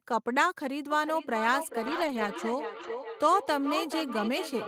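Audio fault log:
0.91 to 4.68 s, feedback echo between two devices: from just under a second in, everything comes back again at roughly four-tenths of a second, and it keeps going to the end. That's two devices in the same room on one call, where one plays the other's mic feed and that mic hears it again. Each echo canceller only cleans up its own playback, so the loop survives. Repeats peak at about 9 dB below the speech and sound thinner and ringier each time round.
1.83 to 2.29 s and 2.75 to 2.89 s, lost packets rebuilt from error correction: no actual dropouts here, but two stretches, about 240 ms and then 80 ms, go rough and a bit noisy. Packets went missing, and the decoder filled in from the low-bitrate backup copy riding in the following packet, so there's no gap, just a grainier patch. The lengths fit a run of 20 ms frames, roughly a dozen in the first and four in the second.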